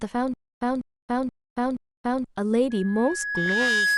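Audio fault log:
Throughout: MP2 compression. The whole clip sounds dull, with a gurgling, granular roughness on the speech and upper frequencies that seem to flicker in and out. The cause is likely an MPEG Layer II encode at around 80 kbps. At that rate the encoder cannot feed all of its 32 sub-bands, so it drops high bands and quantises the rest coarsely. Unlike the burbling near the end, this damage is steady and present everywhere.
0.34 to 2.24 s: Stutter with silent gaps. A 200 ms fragment of speech plays, then about 276 ms of dead digital silence follows, and the cycle repeats four times on an even 477 ms period. This is likely a stalled stream or player replaying its last buffered fragment at each retry and then running dry, so the audio meant for this stretch is lost. Both the regular pace and the truly empty gaps set it apart from ordinary dropouts or packet loss.
2.70 to 3.98 s: Loudspeaker feedback squeal. 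A single tone at 1.7 kHz swells over roughly a second and settles at about 5 dB above the speech. It continues to the end of the clip. It comes from a microphone picking up the loudspeaker it feeds, with loop gain above one at that frequency, so the tone builds on itself. Its fixed pitch and gradual growth distinguish it from a test tone or a whistle interference, which would start at full level.
3.46 to 3.52 s: DAB burbling. For about 60 ms, short blips of noise in single sub-bands break over the squeal and the speech. This fits a handful of corrupted frames from bit errors that slipped past DAB error correction at a bit error rate of around 0.2%. Unlike the steady MP2 dullness, it is brief and erratic.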